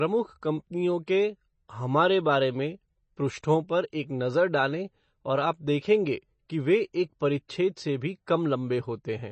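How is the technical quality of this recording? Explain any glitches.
The recording has noticeable codec damage throughout and one small pre-echo. Here are both.

Throughout, nothing comes through above 8.3 kHz, and the speech has that watery, swirly edge, most likely from heavy MP3 compression at a low bitrate, around 32 kbps. The encoder chops off the treble and lets weak frequency lines flicker on and off between frames.

At 7.48 s, right after "देखेंगे कि वे एक" and just before "से भी", there's a pre-echo. The codec smeared its quantisation noise across the block, so a short hiss of about 12 ms leaks in ahead of the attack and softens it.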